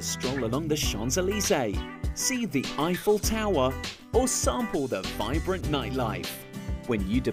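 Nothing goes wrong anywhere in the audio, with no technical faults to point to at any moment.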